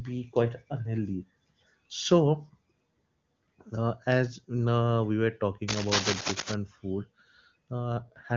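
A worn cable, connector or control was likely being moved from 5.68 to 6.55 s, just after "as now we were." Its contact resistance changed rapidly and unevenly, injecting dense, irregular bursts of noise into the line. For nearly a second the speech is overlaid with a harsh scratching, rustling texture about as loud as the speech itself. It rises and falls in ragged clusters rather than as a steady hiss.

At 7.97 s, and running to the end at 8.37 s, the AMR-WB codec was pushed to a lower rate, the kind of step a weakening radio link forces so that more bits go to error protection. It fits a drop from 23.85 to 8.85 kbit/s. Before this point the HD Voice codec sounds clean. Afterwards the speech keeps its bandwidth with no gap, but it turns rougher, raspier and more synthetic.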